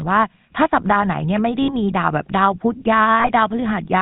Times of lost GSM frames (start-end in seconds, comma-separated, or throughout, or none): 1.62-1.70, 3.20-3.32